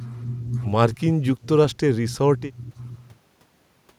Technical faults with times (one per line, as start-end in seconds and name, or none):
1.71-1.77 echo leak